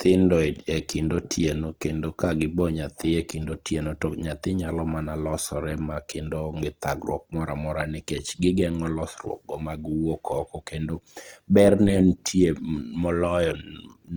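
A speech recording carrying plainly audible Opus compression damage from start to finish. The codec appears to be running in its CELT music mode at a low rate, around 24 kbps by the sound of it. Band energies are preserved and the spectrum stays fullband with no obvious holes, but starved bands get filled with folded or noise-like content, so voiced sounds come across rough and grainy rather than swirly. At 2.60 s there is a single sharp click, most likely from dropped samples. A handful of samples, a fraction of a millisecond's worth, are missing, so the waveform steps abruptly to a later value. The gap is far too short to remove anything audible, leaving only the click and a thin vertical line across the spectrogram.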